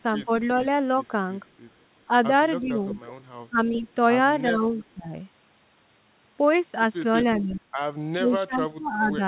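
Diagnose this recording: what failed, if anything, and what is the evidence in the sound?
Speech suppressed in double talk at 0.25–0.29, 2.08–3.86, 4.49–5.13 s and from 7.39 s on: the speech dips by up to about 25 dB, likely from the echo canceller ducking both talkers.

Echo leak at 2.92–3.12 and 4.73–4.84 s: a faint copy 375 ms late, about 20 to 35 dB down, likely loudspeaker pickup the canceller missed.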